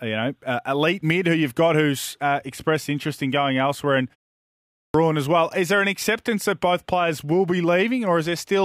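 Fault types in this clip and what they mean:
Clipped start after a pause: at 4.68 s, after a silence of about 0.6 s following "in going elsewhere and", the speech bursts in abruptly with its opening sounds missing, and about 263 ms is swallowed before "as well". The output device drops into a sleep state during the quiet stretch and needs a moment to wake and lock again, so the first part of the returning speech is lost.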